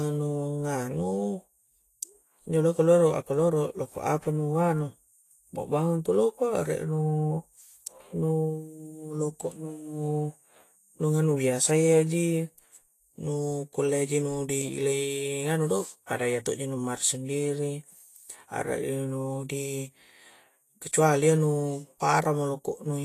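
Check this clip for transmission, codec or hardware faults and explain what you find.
One codec fault runs through the whole recording, with no transmission or hardware faults alongside it.

From start to finish the speech sounds hissy and grainy, with roughened tones, smeared consonant attacks, and nothing above 14.2 kHz. This points to Vorbis compression, likely at a low setting, and the plainly audible damage fits a bitrate around 32 kbps. The encoder keeps a smooth spectral outline but quantises the treble residue so coarsely that fine detail turns into noise of similar energy, while the top band is cut away entirely.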